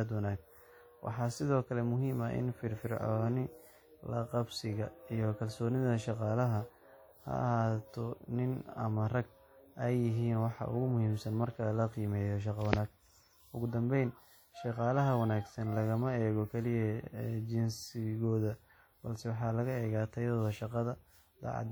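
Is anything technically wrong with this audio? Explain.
Yes. WMA compression is audible throughout the speech, most likely from a transform encoder working at a low rate, which fits a bitrate around 48 kbps. The encoder quantises each long block of spectrum coarsely, so its noise is smeared over tens of milliseconds around every syllable, and weak spectral lines are dropped to zero. The result is plainly audible: a ringing, washy quality with a hiss that swells and fades with the speech, while content still extends to about 20.1 kHz.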